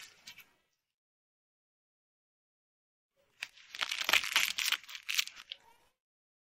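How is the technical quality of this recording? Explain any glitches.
Nothing stood out as a technical problem on listening, so there are no glitches to explain.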